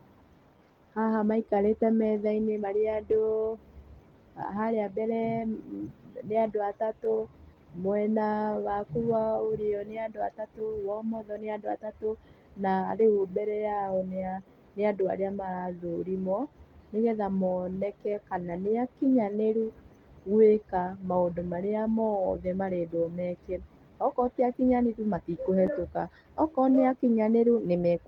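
The sender's clock runs about 2% slow against the receiver's, so clock drift between sender and receiver drains the jitter buffer across the whole speech clip, leaving the tempo faintly unsteady.

From 0.57 s to 27.78 s, repeated timing corrections stretch short pieces to keep pace, adding roughly half a second overall. This plays at about 98% speed with slight, unevenly spaced hiccups.

Scattered short gaps follow where packets arrived late or went missing and were patched by continuing the last sound. There are about three between 3.13 s and 4.69 s, each only a few milliseconds long. About seven more fall between 16.42 s and 21.17 s, the longest around 15 ms. About three more occur between 23.22 s and 25.71 s, the longest around 10 ms. Each is heard as a brief tick or smear.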